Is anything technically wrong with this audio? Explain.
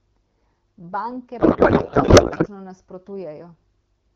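Yes. From 1.39 s to 2.48 s there is a codec payload misread. The speech turns into garbled noise and warble that barely tracks it. This points to octet-aligned AMR frames being unpacked as bandwidth-efficient, so every field lands misplaced. The surrounding AMR wideband speech at 12.65 kbit/s is clear.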